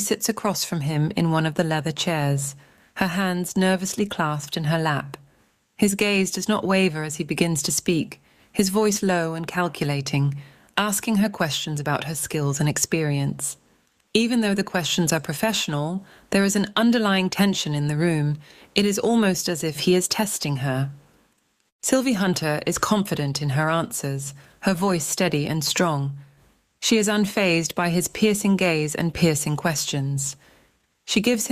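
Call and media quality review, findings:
No audible faults found.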